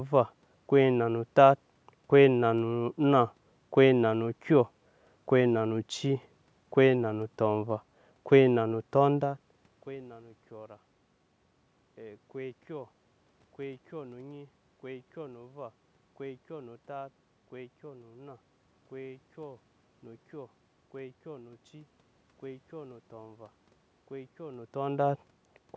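No technical faults can be heard anywhere in this speech recording. The level shifts around 9 and 24.5 seconds come from the talker moving relative to the microphone, and the room noise underneath belongs to the recording itself.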